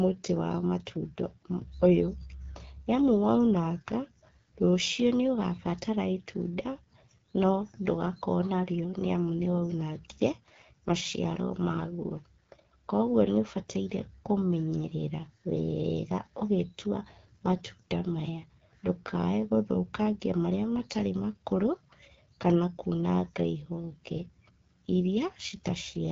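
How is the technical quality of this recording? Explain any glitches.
Quality is held back by one steady problem. Throughout, there's AMR wideband (HD Voice) codec damage: speech sounds rough and raspy, which points to roughly its 8.85 kbit/s rate, with nothing above about 7.6 kHz.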